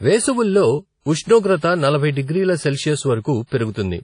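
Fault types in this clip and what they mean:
WMA compression: The whole speech clip has a ringing, washy quality, and a hiss rises and falls with the speech. There is no content above about 10.1 kHz. The damage is plainly audible. The likely cause is a transform codec such as early Windows Media Audio at a low bitrate, around 32 kbps. It spreads noise across long blocks and drops weak detail, which accounts for both the smear and the missing top end.
pre-echo: Two sharp onsets are preceded by a short burst of hiss. The first runs from 1.01 to 1.06 s, spreading about 51 ms ahead of the attack. The second runs from 3.46 to 3.52 s, spreading about 54 ms. In each case the attack sits late in a coding block. The noise budgeted for the loud moment leaks into the quiet just before it, so the onset sounds blurred and soft.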